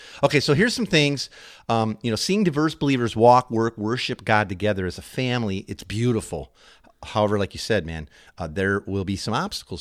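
No technical faults can be heard anywhere in the speech recording.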